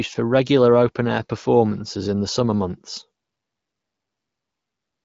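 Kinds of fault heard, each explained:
No faults detected; the speech sits on an AMR wideband (HD Voice) path with nothing above about 7.5 kHz.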